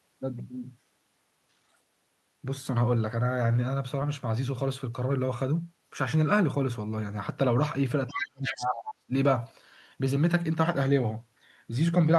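The other side's voice leaking through appears from 8.07 to 8.26 s, only a little quieter than the talker, and again from 8.45 to 8.8 s, about 10 dB down. It sounds like a second voice underneath, likely loudspeaker echo the canceller failed to remove.

Speech suppressed in double talk runs from 8.1 to 9.11 s, about a second. The talker's level dips by as much as about 30 dB while the far side is talking, likely because the canceller turned everything down when both sides spoke at once.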